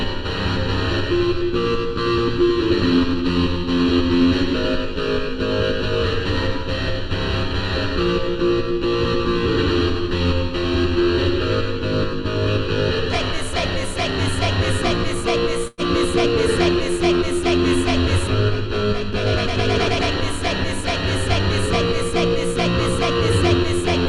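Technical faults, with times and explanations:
15.67 to 15.81 s, burst of packet loss: a run of packets never arrived in time, so for roughly 100 ms the receiver just kept stretching the last bit of sound it had, fading it down, which is why you get that smeared, held tail instead of real audio. There's a brief silence of about 10 ms too. When things pick up again, about 60 ms of the original is simply gone, and the timing after that sits about 43 ms off where it was.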